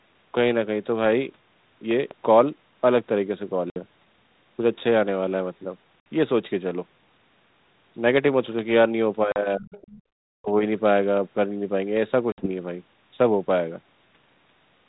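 At 1.91 s a loud pop lands on the speech, two sharp pulses within about a quarter second (ending by 2.14 s), peaking about 5 dB above the speech around them. The speech carries on underneath without a break, which separates it from the dropouts later. The likely source is a voltage step reaching the line, from a plug, a switch or static, shaped into a brief thump by the circuitry that follows.

Packet loss on an ADPCM call opens hard-edged silent holes at 3.7 s (60 ms), 6.0 s (60 ms), 9.32 s (40 ms) and 12.32 s (60 ms), lengths that fit runs of two or three lost packets. Unlike the pop, the speech itself vanishes. When it comes back, the decoder's prediction and step size no longer match the sender's, so the speech restarts slightly distorted and settles within a few tens of milliseconds. The light ADPCM coding heard elsewhere fits G.726 at 32 kbit/s.

Speech suppressed in double talk appears from 9.56 to 9.75 s and again from 10.3 to 10.63 s. 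The talker dips by up to about 40 dB, ducking or breaking into fragments. There is no clean-edged hole and no click on recovery, so it is not packet loss. The likely cause is the echo canceller failing to separate near speech from loudspeaker echo while both sides spoke, and turning everything down.

Between 9.74 and 10.02 s the other side's voice leaks through, about 25 dB below the main speech, as a faint second voice. It sits between the two suppressed stretches, which fits an echo canceller that, likely confused by the overlap, let some of the loudspeaker sound pass into the microphone.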